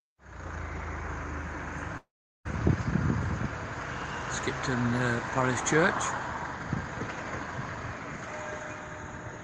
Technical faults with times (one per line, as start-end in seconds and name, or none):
1.97-2.47 long network dropout